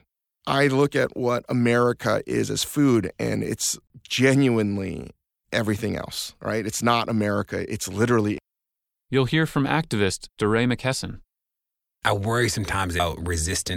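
At 3.87 to 3.90 s, right after "as food and it's", there's a CD skip: the laser jumps to another turn of the disc's spiral, giving a tick, a roughly 30 ms mute, then a jump to another spot before "genuinely everything else right". It happens again at 8.38 s after "it's literally", this time with a near-instant dropout.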